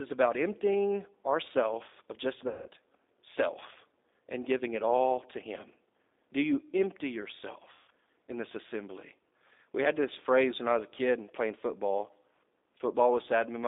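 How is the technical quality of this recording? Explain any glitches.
The recording is narrowband, rough-edged telephone speech with two short dropouts where the sound is stretched and fades.

Throughout, the speech sounds thin and slightly synthetic, confined to roughly 250 Hz to 3.7 kHz with a grainy texture. That is the G.729 codec at work, specifically the G.729A variant, and the damage fits its 8 kbit/s rate. Rather than sending the waveform, it rebuilds each 10 ms frame from a vocal tract filter, a pitch predictor and a handful of pulses. The approximation is clearly audible here.

Between 2.48 and 2.69 s, just after "emptying ourself of just" and before "self and giving it", the sound smears and fades. This is VoIP packet loss concealed by the speech codec. About 180 ms of audio never arrived, which fits six lost packets. The decoder filled the gap by repeating its last pitch and filter settings at a steadily lower gain. 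Because each frame builds on the one before, the speech takes a moment to recover.

At 7.73 to 7.90 s, just before "in this assembly", the same dying-away smear happens again. It is another instance of VoIP packet loss concealed by the speech codec. This time about 150 ms went missing, which points to five packets. The decoder again stretched the last pitch and spectral shape while fading them down. The sound recovers only gradually once real packets resume.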